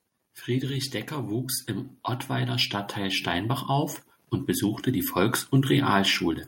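From 0.46 to 1.61 s you can hear the automatic gain rising: the AGC decides the input is too quiet and lifts its gain by about 4 dB, so the talker and the room noise swell up together. It does it again from 2.27 to 3.98 s, this time by about 6 dB, and that ramp finishes just before "und besuchte die". Because the background comes up right along with the voice, it's clearly a gain stage moving, not the speaker getting louder.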